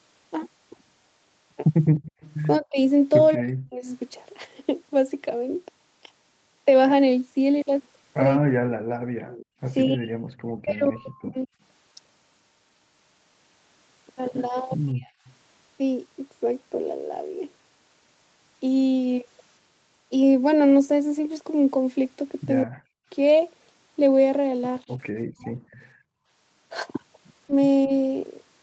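From 1.85 to 2.34 s a faint, delayed second copy of the speech trails the talker by about 208 ms, roughly 20 dB down. This is an echo leak, likely from a speakerphone whose echo canceller let some of the far end's playback back into its microphone. Its fixed lag sets it apart from room reverberation, which smears continuously. The same copy returns at 9.27 to 10.89 s (213 ms, about 25 dB down), 15.25 to 15.33 s (217 ms, about 35 dB down) and 25.72 to 25.9 s (225 ms, about 30 dB down).

Speech suppressed in double talk follows at 2.59 to 3.88 s, then 8.37 to 11.51 s, 14.92 to 15.1 s and 22.64 to 27.9 s. The talker's own voice dips by up to roughly 40 dB or breaks into pieces while the other side is also speaking, likely because the canceller cannot separate it from the echo and turns both down.

At 8.85 to 9.57 s (about 35 dB) and 25.94 to 26.27 s (about 19 dB), the background gated by the echo canceller drops out. 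Here the room tone itself dips briefly and then snaps back, so it is the background that disappears, not the voice.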